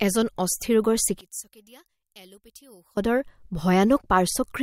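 Speech that, from 1.21 to 2.97 s, drops by about 22 dB to a faint residue, likely one channel inverted cancelling the centred voice in mono. Unlike a gain drop or dropout, what remains is the leftover mismatch between the channels, not merely quieter.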